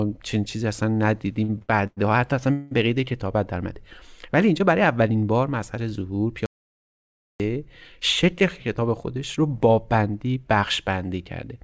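From 1.44 to 1.99 s there are repeated stalls (stutter): the jitter buffer ran dry four times, with the longest gap 99 ms. Held sound fills about 227 ms, so the audio drags without losing anything. Unlike a single freeze, it catches over and over.

At 2.53 to 2.73 s a call audio freeze holds the last sound for 184 ms, likely because packets were held up in transit. The sound then resumes intact, with one smeared pause rather than a stammer.

From 6.46 to 7.40 s an audio dropout to silence cuts out 940 ms completely, likely from lost input. What tells it apart from a freeze is dead digital silence with no held sound or room tone, and that audio is actually missing.

From 8.33 to 9.43 s a jitter buffer speed-up trims roughly 70 ms in tiny pitch-period slices, running at 106% speed. The pitch stays the same while the sound feels slightly hurried.

Throughout, the call path's G.722 coding leaves nothing above 8 kHz.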